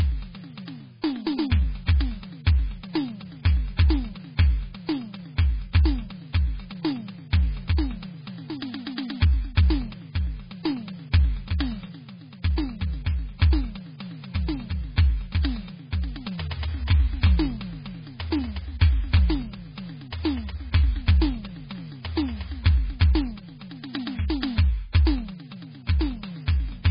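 Throughout the music, heavy MP3 compression, likely from a very low bitrate, leaves nothing above 5 kHz and watery, swirling treble; a spectrogram shows a hard ceiling and flickering gaps.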